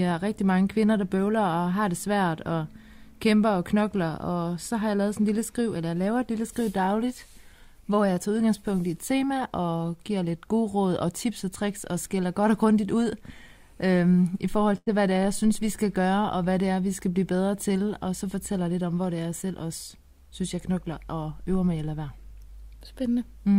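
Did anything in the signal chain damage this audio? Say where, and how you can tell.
Yes: a burst of packet loss at 14.77 to 14.89 s on the network. Concealment stretches the last sound for about 90 ms, fading it, then resumes with about 60 ms missing.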